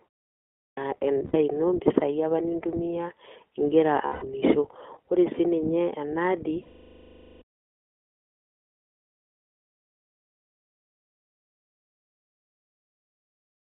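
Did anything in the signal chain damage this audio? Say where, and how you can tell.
Yes. At the codec stage the speech went through iLBC, a narrowband VoIP codec coding each 20 ms frame independently. Throughout, the sound is confined to roughly 300 Hz to 3.4 kHz and has a plainly audible rough, synthetic edge, which fits its 15.2 kbps mode.

At playback, a clipped start after a pause: the output device slept during the opening silence and needed time to wake. When sound begins at 0.63 s, about 144 ms is swallowed, so it starts abruptly without its onset until 0.77 s.

On the network, lost iLBC frames: packets went missing, and the decoder filled each gap by repeating the last pitch cycle mixed with noise. This gives held, buzzy vowel-like sounds at 1.26–1.36 s (80 ms), 4.06–4.25 s (160 ms) and 6.62–7.42 s (800 ms, fading as concealment runs long). That fits runs of 4, 8 and 40 frames, with clean recovery after each.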